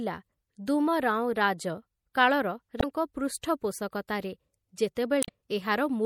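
From the start, the speech sounds watery and swirly, and its treble is dull. The codec damage is plainly audible, likely from MP3 compression. Short of bits, the encoder cut the high frequencies and let weak detail flicker in and out. This fits a rate near 64 kbps.

From 2.77 to 2.84 s, and again from 5.20 to 5.29 s, a brief glitch breaks through. These are damaged data in a compressed stream. The decoder misread the frames there, lost sync and searched for the next frame header.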